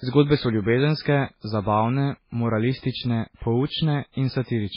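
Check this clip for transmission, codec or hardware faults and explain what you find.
The speech shows one fault, present for the whole clip: nothing above 5.3 kHz, and a watery, swirling texture with smeared onsets. That is likely MP3 compression, heavy damage that fits a very low bitrate around 16 kbps. The encoder cut the treble at a fixed point and zeroed weak frequency lines, which flicker between frames.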